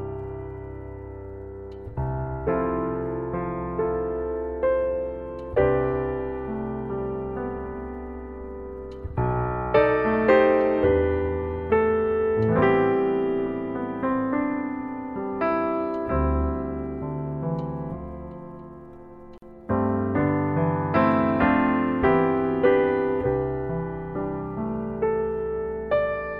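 At 19.38 s a short silence of about 43 ms opens, running to 19.42 s. This is a gap at a join of encoded pieces. Two separately encoded sections were joined untrimmed, so encoder delay and end padding remain. The sound stops, then resumes where it stopped.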